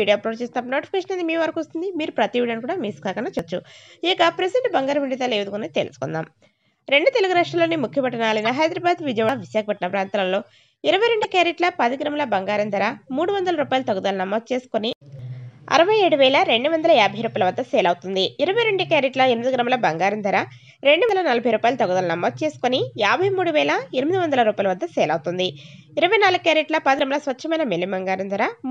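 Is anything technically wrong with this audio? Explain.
Yes, there are two kinds of fault.

Audio missing between chunks, at 3.39, 9.29, 15.19, 21.09 and 26.99 s: the sound skips forward by roughly a tenth of a second, with the two sides butted together. This regular spacing likely comes from a chunk-based process losing audio at each 6 s boundary.

Corrupt frame decoded, at 8.44–8.46 s and 11.22–11.25 s: damaged compressed frames were played anyway, placing energy at wrong frequencies. It is heard as a brief chirp, squeak, blip or burst of noise, a handful of frames for the first and a couple for the second.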